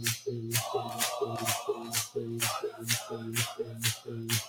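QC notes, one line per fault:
Throughout: noise suppressor applied to music or sounds. A speech-tuned suppressor is treating the sustained parts and tails as noise and pulling them down by around 5 dB, so attacks come through but held sound sinks, giving a pumping, fluttery, thinned-out feel.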